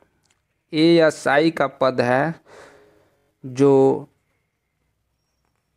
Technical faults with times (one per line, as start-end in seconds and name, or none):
3.18-3.29 system hang loop